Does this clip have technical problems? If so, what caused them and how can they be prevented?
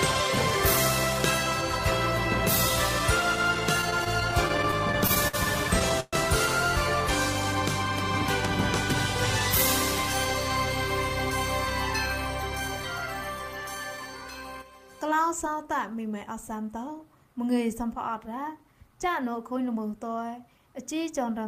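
Yes. Repeated stalls (stutter) run from 3.81 to 5.35 s: packets kept arriving late, so the jitter buffer emptied 14 times and the receiver stretched the last sound across each wait, up to 55 ms, about 197 ms in all, with nothing lost. A deeper adaptive jitter buffer or a steadier network path would prevent this.

A call audio freeze at 6.00 to 6.15 s holds the last sound as a brief fading buzz or hiss for 123 ms before the audio resumes where it stopped. Packets were likely held up in transit, adding that much delay. Prioritising voice traffic (QoS) would prevent it.

A jitter buffer speed-up from 12.43 to 13.29 s plays the audio at 110% speed with pitch unchanged, as the receiver trimmed short pitch-period pieces, roughly a tenth of a second in total, to cut excess buffered delay. Avoiding packet bunching upstream would prevent it.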